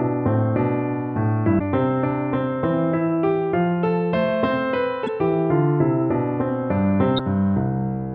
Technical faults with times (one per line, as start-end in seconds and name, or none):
1.58-1.61 damaged data in a compressed stream
5.06-5.09 damaged data in a compressed stream
7.15-7.20 damaged data in a compressed stream